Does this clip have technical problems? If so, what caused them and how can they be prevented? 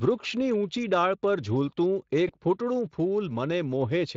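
Yes. From 2.27 to 2.34 s the speech smears into a brief buzzy tone or coloured noise that fades away. This is VoIP packet loss concealed by the speech codec: about 20 ms of audio was lost, which fits a single missing frame, and the decoder filled the gap by extending its last pitch and filter at steadily falling gain. It can be prevented with a stable, uncongested connection, a jitter buffer sized for the network, and forward error correction or redundant packets so lost frames can be rebuilt.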